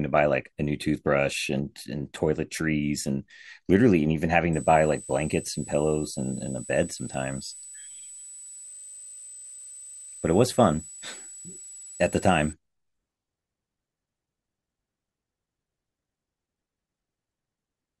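From 4.53 s to 12.53 s a switching supply whistle sits under the speech. A power converter is cycling at an audible rate, producing a thin high whistle, roughly 20 dB below the voice. Its pitch wanders between 7.8 and 8.1 kHz as the converter's load shifts. On a spectrogram this appears as a narrow, slightly wavering horizontal line near 8 kHz. The waveform barely shows it.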